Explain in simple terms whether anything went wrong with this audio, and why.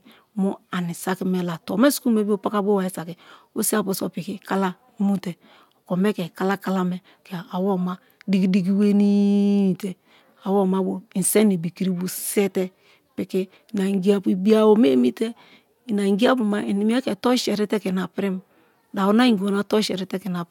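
Nothing went wrong with this audio, so there is no cause to explain.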